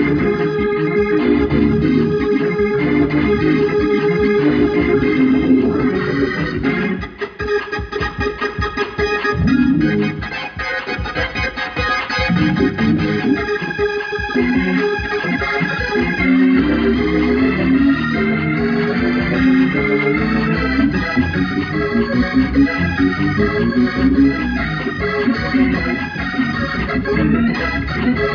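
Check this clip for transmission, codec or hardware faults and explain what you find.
Nothing in the signal points to a transmission, codec or hardware problem; the audio runs continuously throughout.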